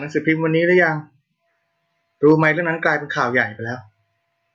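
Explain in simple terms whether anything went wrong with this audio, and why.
Nothing went wrong with this speech recording. No moment in it stands out as a problem, so there is no time to point to.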